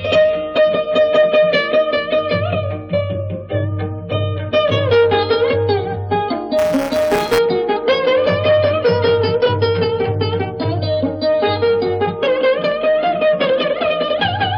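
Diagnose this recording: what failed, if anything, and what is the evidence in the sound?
Buffer tearing from 6.58 to 7.38 s, at the driver or buffer stage: a rattling buzz at 172 Hz, which fits a 256-sample buffer. The writer and hardware read pointer have slipped, so a small slice of each period replays audio from about 10 ms earlier, hard-joined both sides.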